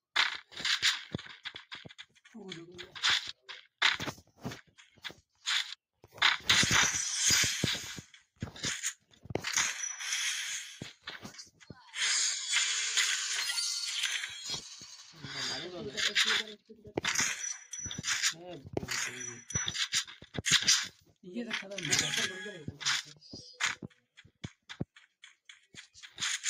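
At 8.96, 14.61, 20.1 and 20.9 s, sound is cut by the noise suppressor. It mistakes sound for noise, dropping it by about 10 to 12 dB.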